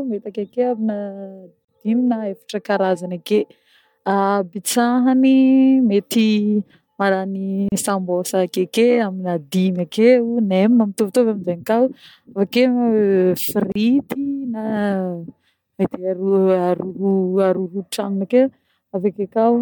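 Speech with a gap at a join of encoded pieces, repeating every 6 s at 1.65, 7.69 and 13.72 s: silences of 40, 34 and 34 ms show as blank vertical spectrogram stripes.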